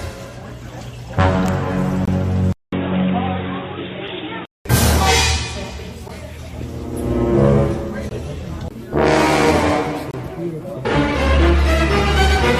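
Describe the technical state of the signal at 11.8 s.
At 11.8 s the signal is intact, with no dropout, distortion, glitch or other technical fault to be heard.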